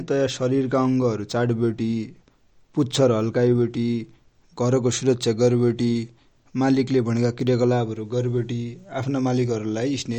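Throughout the speech there is plainly audible swirly, watery coding damage with smeared consonant onsets, and nothing reaches above 18.6 kHz. This is likely MP3 compression, which fits a low bitrate of around 48 kbps, where the encoder drops weak frequency lines frame by frame.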